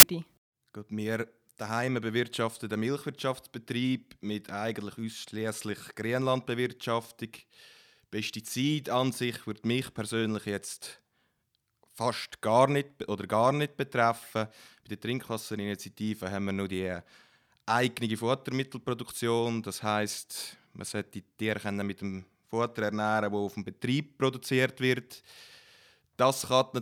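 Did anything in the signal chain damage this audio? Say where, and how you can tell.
Yes. The damage is at the storage and file-reading stage. From 0.00 to 0.03 s there is a hard-edged burst of very loud white noise before the speech begins. This is file tags played as audio. An embedded cover picture's compressed data was decoded as samples.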